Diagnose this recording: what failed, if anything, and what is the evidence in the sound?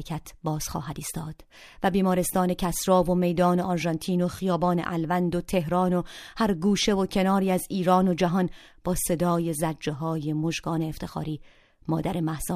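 Nothing failed; no faults heard.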